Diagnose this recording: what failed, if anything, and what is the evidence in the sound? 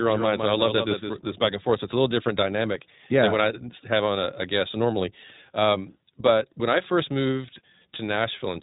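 The codec stage is the culprit for the tone: this is iLBC at 15.2 kbps with 20 ms frames. Nothing gets through above 3.8 kHz, and the speech has that plainly audible rough, slightly synthetic edge from frame-by-frame excitation coding.

There's also a doubled audio track, already running when the clip opens and cutting off abruptly at 1.48 s, just before "and forth". A full-band copy trails by around 150 ms, about 5 dB down, with no decay, likely a second, slower capture path mixed in.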